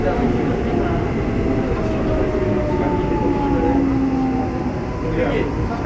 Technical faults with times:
none

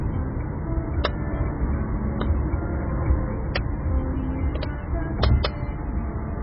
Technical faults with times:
0.00-6.42 MP3 compression

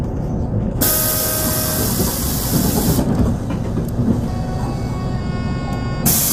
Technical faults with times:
0.00-6.32 low-delay AAC compression

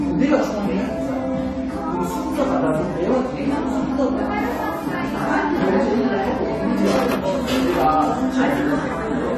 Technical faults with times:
0.00-9.38 AAC compression

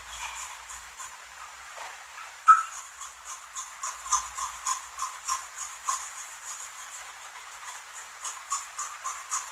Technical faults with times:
0.00-9.51 Opus compression

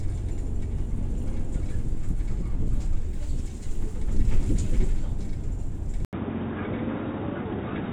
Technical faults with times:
6.05-7.92 input switched to a poorer device

